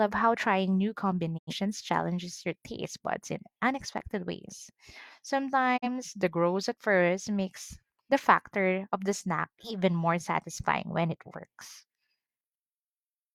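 At 1.37 s, right after "how trying new", the speech fades out over about 20 ms, leaving a silent hole until 1.53 s before "challenges your taste buds" resumes. At 5.76 s a shorter hole lasting until 5.88 s falls just before "the gross at first". Both are digital broadcast dropouts: corrupted frames made the receiver mute and conceal them. The missing audio, about 85 ms and 43 ms, fits two lost frames and then one.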